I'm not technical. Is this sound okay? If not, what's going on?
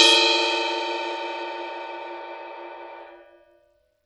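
No. The music has Bluetooth SBC compression damage running through the whole clip, and it is plainly audible. The top end is thin and unsteady, with high detail dropping out or flickering, and a gritty, grainy noise sits on top of the music from start to finish. The likely cause is a wireless link squeezing the audio into a small data budget: the codec splits the sound into frequency bands and starves the quieter treble bands first, while roughly rounding off the rest.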